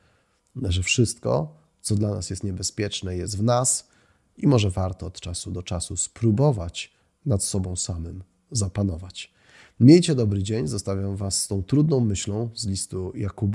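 No technical faults can be heard anywhere in the recording; the speech signal stays continuous and stable throughout.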